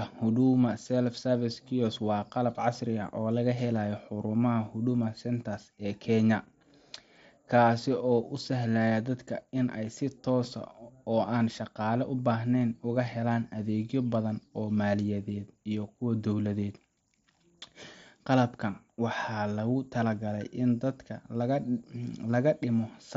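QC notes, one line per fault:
No faults found in this speech clip.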